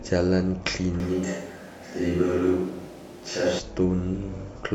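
A short speech recording where, from 1.00 to 3.59 s, the sound suddenly turns roomy and hollow with thinner bass and room noise roughly 30 dB down, likely a switch to a distant microphone, level unchanged.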